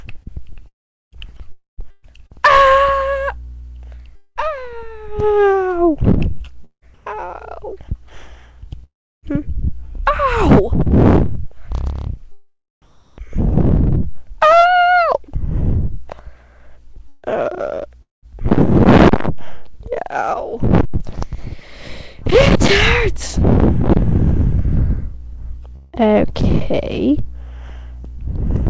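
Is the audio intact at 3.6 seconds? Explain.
No. Sound chopped by the voice detector runs from 0.23 to 7.14 s, so 3.6 s falls inside it. The cause is likely a sender-side voice activity detector repeatedly switching transmission off and on, so quiet stretches and sound edges were dropped and replaced with synthetic comfort noise, roughly 0.9 s in total across the span. The result is choppy sound with two or more holes, all below the call path's 8 kHz ceiling.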